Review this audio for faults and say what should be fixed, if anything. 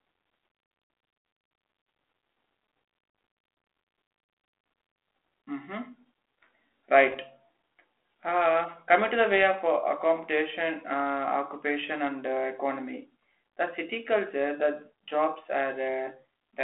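Bit errors on the ADPCM link, at roughly 0.7 percent of bits, corrupted the G.726 stream from 7.10 to 7.17 s. Each error throws the decoder's step size and predictor off, so the speech breaks into pops and a rough burst with brief level jumps. Adding error protection or improving the radio link would prevent this.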